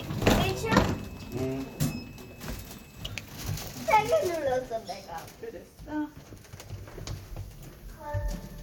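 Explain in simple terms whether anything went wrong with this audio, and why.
Nothing went wrong here: the sounds in this recording come through steadily, with no dropouts, glitches, or sudden jumps anywhere along the way.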